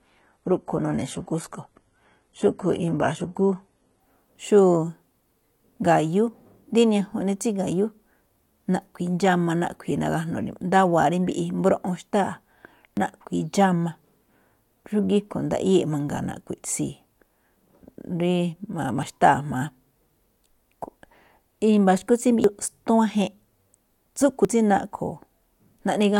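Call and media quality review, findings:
Adaptive stream starting at a low bitrate, 0 to 4.0 s: speech dull and synthetic-sounding in the treble, stronger codec artefacts, then a sudden clean step up with no gap. Sounds like a very low-bitrate HE-AAC start, with nothing above about 11.8 kHz, switching to a fuller AAC-LC rendition (around 96 kbit/s).

Dropped buffer (overrun), likely cause, at 12.97, 16.17, 19.03, 22.44 and 24.45 s: speech jumping ahead with no silence. Roughly 20 ms missing each time, longer at 22.44 s (about 70 ms). Capture samples were overwritten before being read, so the two sides were spliced directly.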